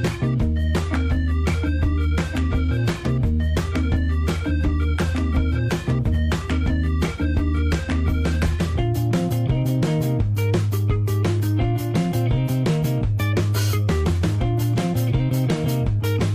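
At 6.09 to 6.14 s the audio lurches forward, dropping about a tenth of a second. These are compressed frames skipped: frames the decoder never played, a jump that fits roughly two frames of about 46 ms.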